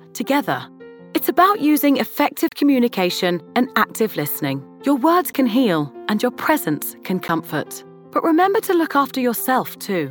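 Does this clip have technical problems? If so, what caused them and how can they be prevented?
Yes. Blocks of digital silence cut the sound off and back with no fade: a 35 ms hole from 2.49 to 2.52 s, and 12 ms ticks at 5.33 and 7.28 s. The output buffer likely wasn't filled in time, and the two short gaps fit a 512-sample buffer. A larger buffer or a higher-priority audio thread prevents this.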